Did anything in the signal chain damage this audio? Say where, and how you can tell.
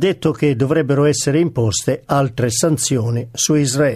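No, nothing in the chain audibly damaged this audio.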